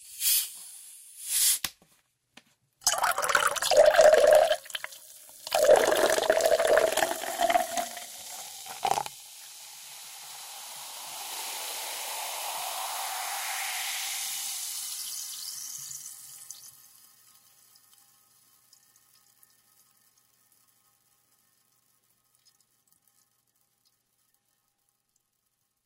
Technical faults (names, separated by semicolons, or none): none